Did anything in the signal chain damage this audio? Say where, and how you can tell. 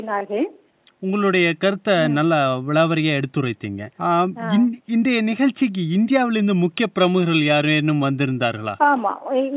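No, nothing in the signal chain damaged this audio.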